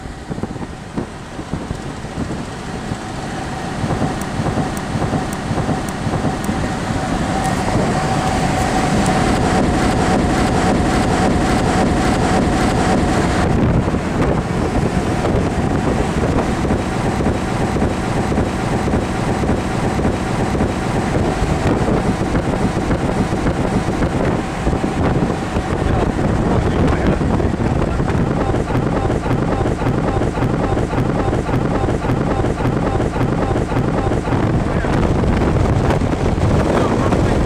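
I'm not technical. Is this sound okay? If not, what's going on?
No. The clip has repeated frames, a stutter at 4.25 to 6.48 s, 9.82 to 13.17 s, 17.16 to 21.06 s, 22.55 to 24.22 s and 28.77 to 34.34 s. Each time, the same slice of sound, a little over half a second long, plays again and again, between 3 and 10 extra times. A short chunk of the compressed audio was copied over and over, which makes the clip about 17 seconds longer.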